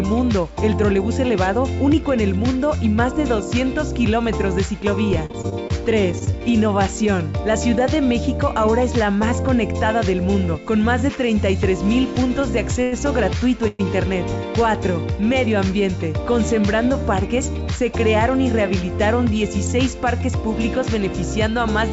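This audio runs through a call path whose band stops at about 7 kHz, which fits G.722 at 64 kbps. From 5.26 to 6.35 s there is repeated packet loss (robotic sound). Nine short holes, the longest 39 ms, are patched by repeating sound, and about 120 ms is truly missing. That missing sound makes it choppy, unlike a single stall. Two short stalls from a late packet follow, at 12.83 to 12.94 s (88 ms) and 13.38 to 13.43 s (37 ms). Each holds one sound too long with a faint buzz, then resumes with nothing lost. At 13.68 to 13.81 s the sound hangs as a fading buzz for 116 ms without dropping to silence, then carries on intact. This is likely a call audio freeze from held-up packets, and it is longer than the stalls. From 15.91 to 18.31 s a jitter buffer speed-up plays the audio about 4% fast at unchanged pitch by trimming roughly a tenth of a second, so it runs slightly fast rather than sounding broken.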